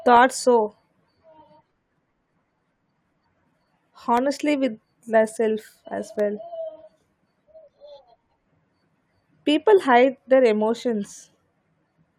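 From 0.17 to 10.18 s, periodic USB or driver dropouts: tiny silent gaps every 2.0 s, each well under a millisecond, tick through the speech, their strict regularity ruling out random clicks.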